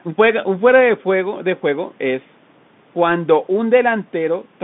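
Bluetooth CVSD headset codec damage runs through the whole speech clip, from start to finish. CVSD codes each sample as a single up-or-down bit and adapts its step size, a scheme that fits a 64 kbps headset link. The line here passes only about 150 Hz to 3.6 kHz, so the speech sounds thin and boxy. Where the sound changes faster than the step can follow it distorts, s sounds turn scratchy, and a granular hiss sits beneath the speech.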